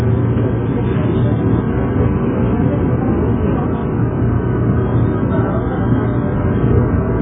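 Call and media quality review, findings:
Dull, smeared sound throughout, with fizzy warble on sustained parts. Spectrogram shows a hard ceiling at 3.7 kHz. Likely AAC compression (AAC-LC), with heavy coding damage consistent with a bitrate near 8 kbps starving the quantiser.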